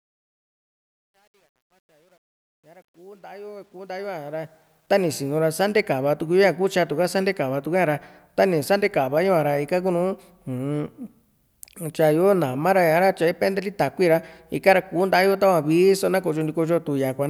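From 0 to 5.16 s, the speech fade-in shows truncation distortion, gritty to 3.94 s, which fits a roughly 10-bit undithered stage; the waveform shows stair-steps, the spectrogram broadband hash.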